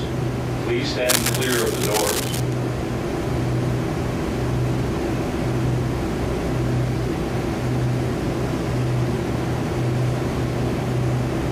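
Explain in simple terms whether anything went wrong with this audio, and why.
From about 1.08 to 2.40 seconds, a harsh scratching, rustling layer sits over the audio. It is uneven and crackly, and nearly as loud as the sound itself, so it is hard to miss. This is cable scratch noise. The likely cause is a worn cable, plug or knob being moved during recording. When a tired metal contact shifts, the electrical connection keeps flickering between good and poor, and each flicker lands in the recording as a burst of scratchy noise.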